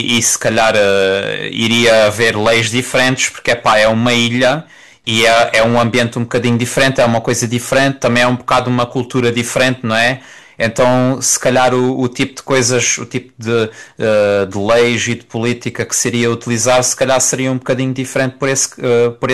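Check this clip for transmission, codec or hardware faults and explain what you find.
Hard clipping runs through the whole speech clip. The level reaching one stage of the chain sits about 15 dB above what that stage can pass, so every peak is sliced off flat. Around 7 percent of the waveform is pinned at that ceiling, and the squared-off tops throw energy into high harmonics that were never in the source. The result is a constant harsh, buzzy fuzz riding on every loud syllable rather than occasional crackle.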